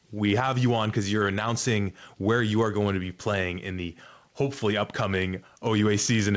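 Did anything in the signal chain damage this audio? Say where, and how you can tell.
Yes. Gain pumping runs through the whole speech clip: the gain ducks by around 5 dB under every loud syllable. This points to input gain set likely far too high at capture, with a fast limiter or compressor repeatedly pulling it back. The G.722 call path, which leaves nothing above 8 kHz, is not the source.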